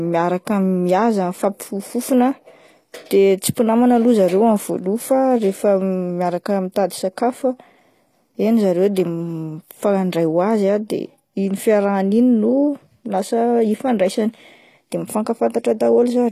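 From start to finish the speech carries HE-AAC compression damage, plainly audible: the s sounds come out gritty and lispy, with a metallic sheen in the treble. That upper range is likely rebuilt by band replication rather than coded, and the low bitrate it points to (around 24 kbps) fits this. Nothing sounds above about 14.9 kHz. A plain low-pass would simply dull the top. Here the treble stays bright but its harmonics fail to line up with the lower spectrum.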